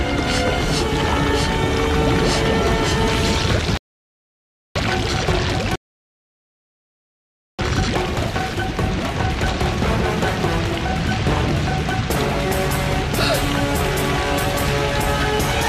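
Two rebuffering stalls interrupt the audio: silence from 3.77 to 4.76 s, adding about 0.98 s, and from 5.76 to 7.59 s, adding about 1.83 s. Each time the sound resumes exactly where it halted, so unlike a dropout nothing is skipped; playback simply waited for more data.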